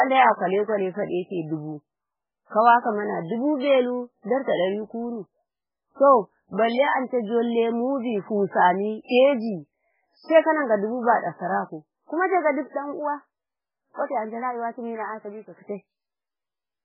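MP3 compression runs throughout the speech. Nothing is heard above about 5.2 kHz, and the heavy watery, swirly smearing and chirping on s sounds fit a very low bitrate of around 8 kbps, likely from an MP3 encoder zeroing weak frequency lines frame by frame.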